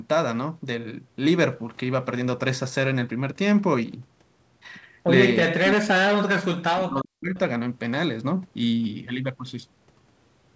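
From 5.45 to 7.36 s the speech keeps ducking and breaking up. It drops out in chunks adding up to roughly a second and a half, at worst falling by about 40 dB, so it nearly vanishes. That points to speech suppressed in double talk, most likely the echo canceller mistaking the near talker for loudspeaker echo while the far end was also talking, and turning everything down. Throughout, the sound stops at 8 kHz, which fits a G.722 call path.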